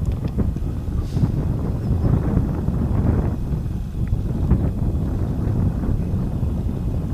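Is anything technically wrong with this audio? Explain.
No, nothing is technically wrong with this audio.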